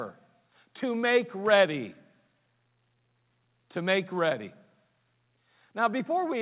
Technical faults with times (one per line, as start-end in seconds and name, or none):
none